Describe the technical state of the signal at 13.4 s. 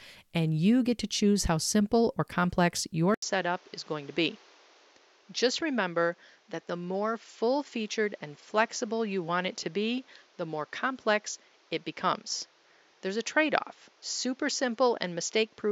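At 13.4 s the recording is still on what was likely an input switched to a poorer device, a change made at 3.14 s, right after "simple or complex your", and held to the end. A brief 80 ms silence marks the switch. From then on, nothing reaches above 7.3 kHz, so the sound is duller, roughly 5 dB quieter, and carries a new noise floor about 30 dB below the signal.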